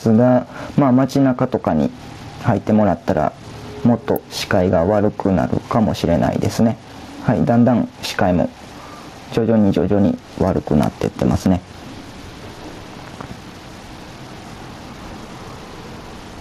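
From start to finish the sound carries periodic clock jitter. Interference at around 1 kHz is shaking the converter's sampling clock, so every component of the sound gains sidebands about 1 kHz above and below it, stronger on high-frequency content. The result is a rough, metallic edge riding on the sound that disappears whenever the sound stops. This sets it apart from a steady hum or whine, which would stay audible through the quiet gaps.

Gain pumping also runs through the whole clip. The gain ducks by roughly 10 dB under every loud passage, so loud and soft parts sit unnaturally close in level and the sound feels squashed and breathing. The likely cause is gain set far too high for the microphone, with a fast limiter or compressor clamping down on each peak. Unlike a slow automatic level control, the dips track individual loud sounds closely rather than drifting over seconds.

At 4.16 s and again at 10.83 s an electrical switching spike cuts in: a sharp, very brief snap laid on top of the sound, each lasting only a few milliseconds. 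These are likely arcs from a nearby switch, motor or static discharge picked up by the audio line. They differ from digital dropouts or clipping clicks because nothing is removed or flattened. The snap is simply added over whatever is playing.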